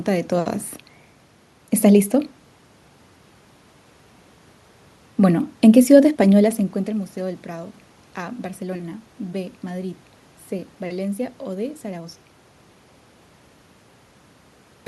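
No technical faults can be heard anywhere here.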